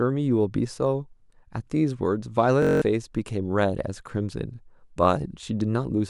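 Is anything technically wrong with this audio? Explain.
Yes. There is a system hang loop from 2.62 to 2.82 s in this speech clip. The playback system stalled while the audio hardware kept replaying its ring buffer, so one 21.3 ms fragment repeats nine times back to back. At that length the repetition runs at about 47 Hz and comes across as a brief, steady buzz in place of the speech. The loop length fits a 1024-sample buffer. About a fifth of a second of real audio is lost.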